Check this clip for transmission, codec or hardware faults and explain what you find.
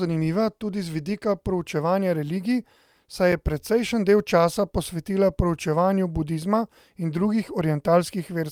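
One fault stands out, a brief dropout in the speech.

At 3.32 s there is a block of digital silence: about 5.3 ms of samples cut abruptly to silence, which fits a 256-sample buffer not being filled in time. It is heard as a tick or dip. The waveform shows a flat line with vertical edges, and the spectrogram a thin broadband stripe.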